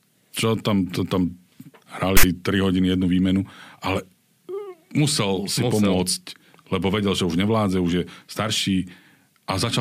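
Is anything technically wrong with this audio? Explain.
Yes. From 2.17 to 2.23 s the speech is broken by file tags played as audio: a block of text tags is read as sample data, giving a loud, hard-edged rasp. On the waveform it shows as a dense block offset to one side; the spectrogram shows a broadband band with sharp vertical edges.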